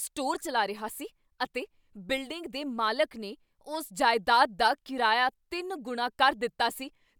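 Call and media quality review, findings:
No audible faults found in this speech recording; nothing to escalate for the call or media path.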